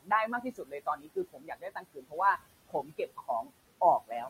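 Noise suppressor artifacts run through the whole recording. The suppressor pulls down what it judges to be steady background by about 20 dB, frame by frame, so the room noise, which sits about 17 dB under the speech, sinks in the gaps and swells back under each phrase. That pumping sets it apart from a simple gate, which would switch the noise cleanly on and off.

Speech cut by the noise suppressor comes in three places. From 0.00 to 0.11 s, the opening is pushed down by about 21 dB. From 0.27 to 2.16 s, about a second's worth of the sound is treated as noise and dropped by up to about 21 dB. From 2.68 to 3.50 s, roughly a third of a second is lowered by about 20 dB. Unlike a dropout, the audio doesn't vanish. The quiet parts and endings sound swallowed and faint, sinking together with the background.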